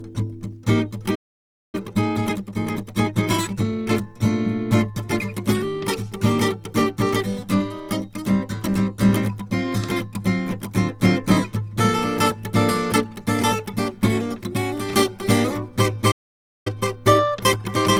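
Throughout the music, the sound carries the smeared, watery artefacts of a very low-bitrate encode inside a high-bitrate MP3, likely low-bitrate audio saved at a high bitrate. A spectrogram shows blurred, patchy upper bands, and the large second encode cannot restore the lost detail.

At 1.15 s a playback stall cuts the music dead for about 0.58 s, until 1.75 s. The likely cause is the player running dry or its thread blocking. The waveform drops to a flat line and the spectrogram shows a blank vertical gap before the audio resumes.

From 1.75 s to 4.07 s a time-compressed catch-up follows. The player trims its backlog by removing small slices and cross-fading the joins, so the music runs 1.25 times faster at unchanged pitch. The spectrogram shows compressed events and faint seams.

At 16.11 s a second playback stall, likely from the same starvation, silences the audio for about 0.54 s, until 16.67 s. 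The waveform again flattens completely and the spectrogram shows an empty band across all frequencies before the sound continues.

From 16.67 s to the end a milder time-compressed catch-up runs at 1.1 times speed. The pitch holds and the hurrying is subtler. The spectrogram shows slightly squeezed events and occasional splice seams.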